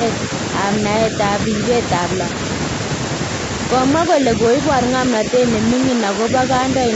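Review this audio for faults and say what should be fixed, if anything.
Speech suppressed in double talk at 4.09–4.24 s, 4.50–4.54 s, 5.12–5.42 s and 5.79–6.28 s: the speech dips by about 5 dB, likely from the echo canceller treating overlapping talk as echo. Prevent this with better double-talk detection and gentler residual echo suppression.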